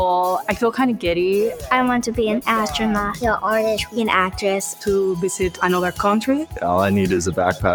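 The sound pumps and thins throughout, with held and fading parts sinking in level while sharp onsets come through largely intact, a level swing of roughly 5 dB. That is the signature of a noise suppressor applied to music or sounds: a processor tuned for speech was left active, so it treats steady tones, ambience and decay as noise to be removed and keeps pulling them down between attacks, which leaves the audio sounding unsteady and stripped of its tails. The clearest single instance is from 1.53 to 1.68 s, where the sound is cut by the noise suppressor. For about 150 ms that passage drops noticeably below its surroundings, by about 7 dB at the deepest point, because the suppressor judged this stretch to be noise and attenuated it harder than the material around it.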